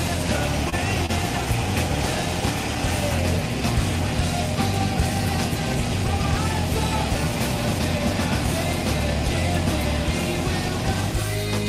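There's short concealed packet loss at about 0.69–0.74 s and again at 1.06–1.10 s. Each time roughly 20 ms never arrived, and the receiver papered over it by stretching the preceding sound for about 25 ms, so you hear a quick smear or wobble.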